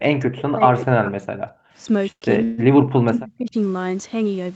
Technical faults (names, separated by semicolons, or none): speech suppressed in double talk; background gated by the echo canceller; call audio freeze